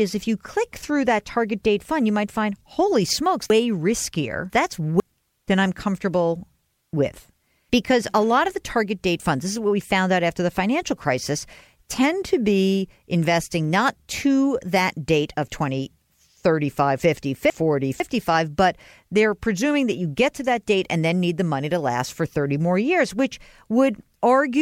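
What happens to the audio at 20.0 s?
Nothing goes wrong at 20.0 s; the speech carries on intact through that moment.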